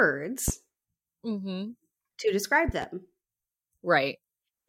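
A voltage pulse, likely from a plug, switch, static discharge or driver glitch, entered this speech recording twice, and each time the following circuitry shaped it into a brief spike laid over the speech, which continues underneath. The result is a loud pop: a single sharp one at 0.48–0.51 s, around 15 dB above the speech, and a double pop at 2.69–2.86 s, just after "to describe", roughly 10 dB above it.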